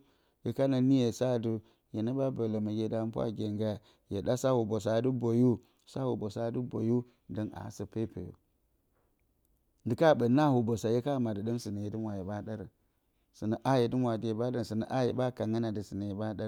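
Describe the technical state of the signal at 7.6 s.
At 7.6 s the speech signal is intact, with no dropout, distortion, glitch or other fault audible at that moment.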